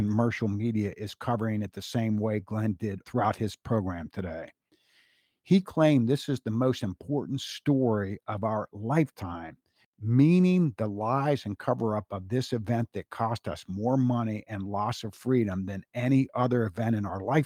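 Nothing in the recording stood out as a technical problem on listening.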